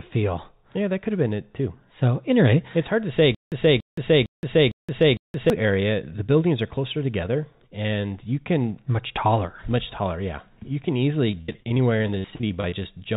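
Speech over a narrowband call path with nothing above 4 kHz, which fits G.711 mu-law at 64 kbps. From 3.35 to 5.5 s, right after "it's hard to say", a 285 ms burst repeats five times every 456 ms with 171 ms of silence between. This is a stutter with silent gaps, likely a stalled stream replaying its last fragment, and the audio before "area the buildings are" is lost. From 11.31 to 12.82 s, after "can easily", the sound turns choppy and robotic. This is repeated packet loss: over twenty holes, the longest 74 ms, are patched by stretching the previous sound, covering about 27% of the span.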